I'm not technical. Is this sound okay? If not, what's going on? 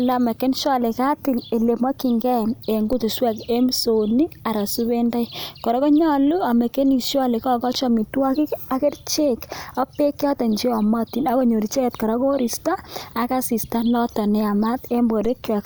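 No. The speech has two DC steps, at 2.93 s and 15.25 s. At each moment the waveform's resting centre line suddenly jumps away from zero, as happens when a converter recalibrates or an offset input is switched in. You hear this as a brief low thump or click while the speech carries on unaffected. The offset doesn't stay: it fades back toward zero within a small fraction of a second, so each event is a short thump rather than a lasting change.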